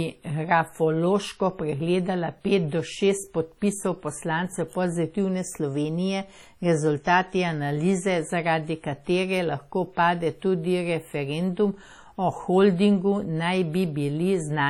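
Speech runs through the whole clip with heavy transform-codec damage, likely from WMA compression at a low bitrate, which fits something near 32 kbps. Quantisation noise smears across tens of milliseconds around each sound, giving a ringing, washy quality and a hiss that swells and fades with the level of the speech. Weaker spectral detail drops out, and there is no content above 17.9 kHz.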